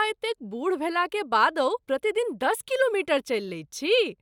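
Nothing stood out on listening to the speech here that would point to a technical problem at any moment.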